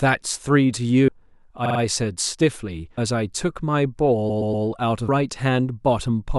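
A recorder that works in fixed two-second chunks likely drops audio each time it closes one chunk and opens the next, and this speech recording shows that pattern of audio missing between chunks. At 1.08 s, 2.97 s and 5.08 s, roughly a third of a second of speech vanishes, and the audio on either side is butted together with no silence, so the talker seems to jump forward abruptly at evenly spaced points. Separately, short runs of compressed frames were written more than once, producing repeated frames that the decoder plays back again. From 1.65 to 1.79 s a 48 ms block is heard three extra times, adding 144 ms, and from 4.29 to 4.65 s a 120 ms block repeats three extra times, adding 360 ms. Both come across as a rapid mechanical stutter that stretches the recording.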